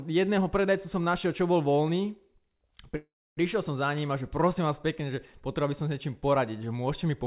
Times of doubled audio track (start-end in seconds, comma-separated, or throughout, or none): none